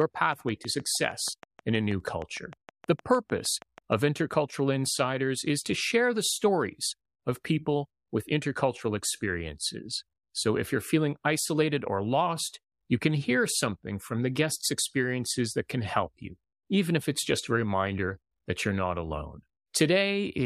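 Interference from nearby equipment or a faulty connection or power supply is the likely source of a train of clicks in this speech clip from 0.02 to 4.08 s: around thirty evenly spaced pulses at about 6.4 per second, peaking roughly 5 dB above the speech and ticking through the pauses too.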